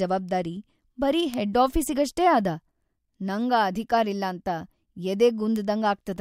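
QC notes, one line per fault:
1.34 s, bit error spike, just after "ಜವಾಬ್ದಾರಿ ಬರೀ". Two adjacent samples jump by a flipped bit to about -11 dBFS, giving one sharp broadband tick.
5.56 s, bit error spike. A single sample leaps to about -11 dBFS and snaps back. It is heard as an isolated click unrelated to the speech.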